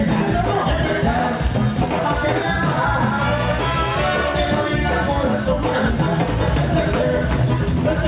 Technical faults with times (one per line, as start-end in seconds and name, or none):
0.00-8.08 gain pumping